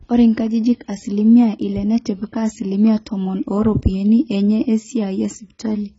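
From start to finish the speech sounds dull and smeared, with nothing above about 7.6 kHz, a warbly, fizzy texture on the sibilants, and little holes in the spectrum on sustained sounds. That's the signature of heavy AAC compression, likely AAC-LC running at a very low rate, which fits something around 16 kbps. At that budget the encoder drops the top end and throws away or approximates whole bands, so detail breaks up into swirly noise.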